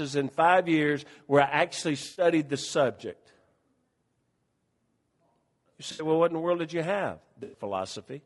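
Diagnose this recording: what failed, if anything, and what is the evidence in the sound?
Codec stage. Throughout the speech there is plainly audible roughness and graininess, with noise between the harmonics and a thin, synthetic top band. This is likely low-delay AAC compression such as AAC-ELD. Its short frames resolve pitch harmonics poorly, and the damage points to a low bitrate near 32 kbps.

Network and codec stage. AAC frame loss with concealment appears three times, as smeared, noisy patches. The first runs 2.05 to 2.25 s, between "years where I actually" and "the subject". The second runs 5.91 to 6.05 s, just before "what in the world". The third runs 7.43 to 7.61 s, right after "world did you have". The decoder rebuilds the missing 80 to 120 ms from the last good spectrum.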